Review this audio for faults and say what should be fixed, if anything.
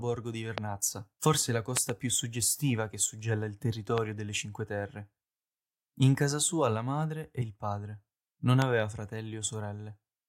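Loud pops occur at 0.58–0.60 s, 1.77–1.91 s (two pops in quick succession), 3.98–4.00 s and 8.62–8.64 s. Each is a sharp transient roughly 20 dB above the speech, which continues underneath. A sudden voltage step or pulse, likely from a plug, switch, static discharge or driver glitch, entered the signal chain and was shaped by the following circuitry into a brief thump. To prevent this, secure connections, avoid switching during recording, and keep the interface driver stable.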